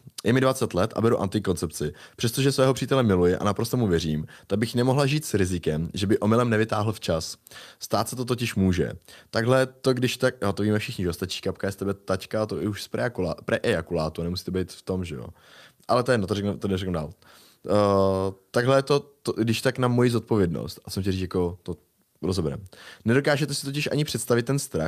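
No technical faults can be heard anywhere in the recording.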